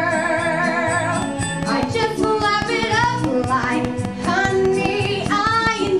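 A train of clicks runs from 1.22 to 5.88 s: about twenty identical pops, regularly about five per second, peaking about 15 dB above the audio, likely from electrical interference. Their steady, identical shape separates them from random crackle.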